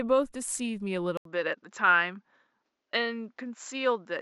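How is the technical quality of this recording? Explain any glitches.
The recording has one fault: an apparent input switched to a poorer device at 1.17 s, lasting to the end. A gap of 80 ms marks the switch. From there the speech loses everything above 7.6 kHz and sounds duller, and a faint new background noise appears well below the speech, though the overall level barely changes. The likely cause is the system moving to a narrower-band microphone mid-recording.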